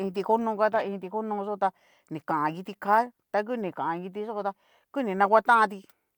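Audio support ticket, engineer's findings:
No faults found on playback.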